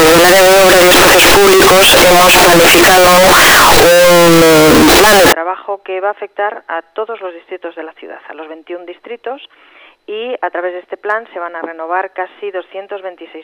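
From the start to 5.33 s the audio is extremely loud and harsh, pinned at a nearly fixed high level with a squared-off waveform, and quiet background noise comes through as loudly as the main sound. This is likely float read as integer: 32-bit float samples interpreted as 32-bit integers.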